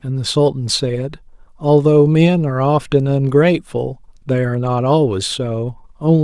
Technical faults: none

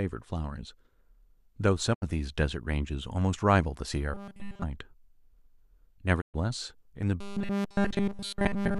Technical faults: digital broadcast dropout; robotic sound from repeated short buffers

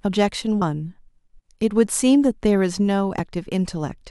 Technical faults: damaged data in a compressed stream

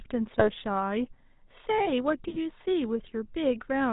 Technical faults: GSM full-rate codec; GSM bit errors

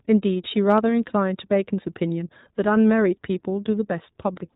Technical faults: iLBC codec

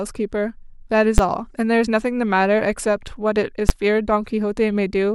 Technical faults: invalid numbers at full scale

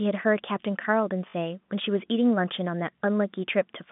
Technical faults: packet loss with last packet repeated

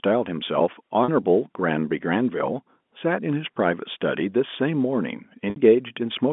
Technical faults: packet loss with pitch repetition

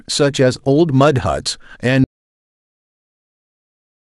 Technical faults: audio dropout to silence

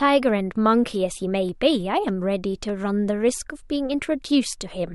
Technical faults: clock drift buffer slips

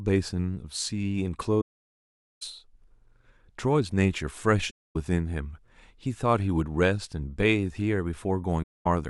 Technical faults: AAC frame loss with muting

